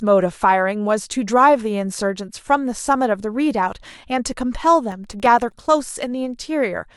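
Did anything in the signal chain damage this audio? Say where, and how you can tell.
Yes. The damage happens at the driver and buffer stage. From 4.92 to 5.66 s the speech carries a gritty burst of processor overload crackle. The processor could not refill its small audio buffers in time, so deadlines were missed again and again. Each miss drops in a short slice of silence with hard edges. The gaps are very short, which suggests buffers of under a millisecond, and something like fifteen misses. The crackle stops once the load clears.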